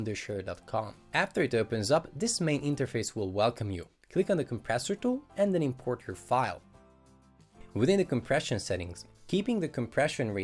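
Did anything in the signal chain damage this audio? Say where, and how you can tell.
No, nothing in the chain left an audible mark on this audio, so there is no stage to point to.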